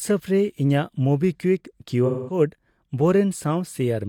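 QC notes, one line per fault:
2.05 to 2.38 s, AAC frame loss with concealment: about 0.21 s of the speech goes missing, which fits roughly five lost AAC frames in a row, and the decoder papers over the gap by reusing the last good spectrum with its signs scrambled or its energy interpolated. That's why the patch comes out smeared, noisy and phasey rather than as a clean dropout, before the real signal picks back up at 2.38 s.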